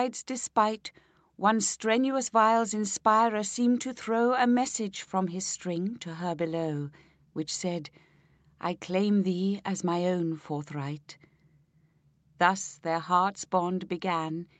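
Nothing stood out on listening; the audio carries the expected character of a call path, with content reaching up to about 8 kHz after the microphone processing and the Opus codec.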